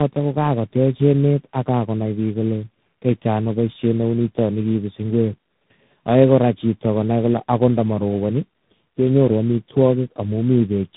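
Speech, with tandem speech coding throughout. The audio sounds rough, muffled and warbly from start to finish. There is nothing above 3.8 kHz. The call seems to have crossed several networks, each decoding and re-coding with its own speech codec. The artefacts point to three speech codecs in a row, likely a low-rate AMR-NB coder, then CVSD, then G.726 at around 24 kbit/s. Each stage coded the damage left by the one before.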